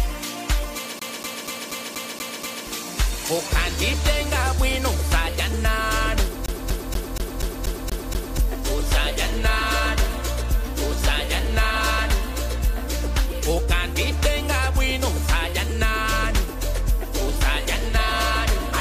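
At 0.99 s the CD sticks on one turn until 2.67 s. A scratch keeps kicking the laser back a track. The same 0.24 s of sound repeats seven times, each with a brief mute. It returns from 6.46 to 8.38 s, repeating eight times.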